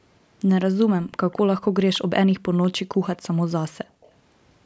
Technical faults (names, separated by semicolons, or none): echo leak; background gated by the echo canceller